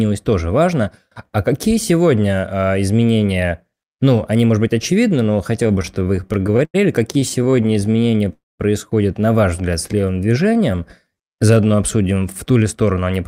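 Packets arriving late kept draining the jitter buffer from 5.63 to 6.76 s, just after "может быть очевидны но". This repeated stalls (stutter) produced sixteen short gaps, the longest 94 ms, patched by continuing the last sound, about 254 ms in all, so the speech drags and hiccups. The same starvation returns from 7.20 to 8.10 s as fourteen tiny stalls, none longer than 18 ms, adding a fluttery unevenness.

Overlapping its end, a jitter buffer slow-down from 7.96 to 8.26 s rebuilds reserve by repeating pitch periods. It adds 46 ms and runs the speech at 87% speed without a pitch change, so it sounds drawn out.

A call audio freeze follows from 8.33 to 8.62 s, ending just before "на ваш взгляд". Packets were likely held up in transit, emptying the buffer. The last sound continues as a fading buzz, then about 200 ms of silence, inserting a 265 ms pause before the speech resumes intact.

A second jitter buffer slow-down from 9.95 to 12.20 s, leading into "в ту ли сторону", stretches the speech by 258 ms to 89% speed. 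The syllables sound elongated while the pitch holds steady.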